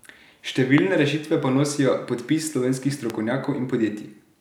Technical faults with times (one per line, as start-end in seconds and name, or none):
0.78-0.80 loud pop
3.10-3.12 loud pop